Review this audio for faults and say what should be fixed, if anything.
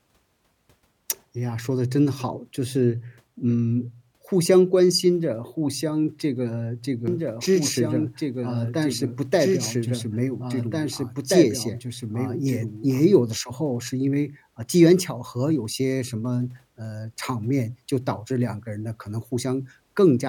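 From 7.08 to 13.0 s there's a doubled audio track: a second full-band copy of the speech trails about two seconds behind, roughly 5 dB quieter, with no room colour, and it cuts in and out abruptly. That's likely a second capture path or a misaligned edit holding two copies. Make sure only one input feeds the mix and check the edit for stray overlapping regions.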